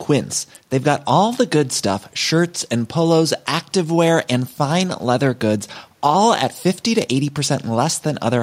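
Nothing in the speech stood out on listening, with only the room's own background noise sitting about 43 dB beneath it.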